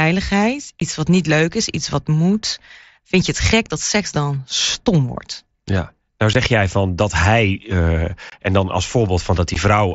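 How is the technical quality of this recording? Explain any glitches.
The recording has four brief dropouts on a wideband Bluetooth headset link. The mSBC codec's light graininess is audible on louder speech.

Unconcealed Bluetooth headset packet loss hits at 0.80 s before "wat niet leuk is", 6.33 s before "jij van dat hij", 8.30 to 8.32 s before "en dan als", and 9.54 s. Lost headset packets were replaced by silence or an idle pattern, leaving 15 ms holes (22.5 ms at 8.30 s) with abrupt edges.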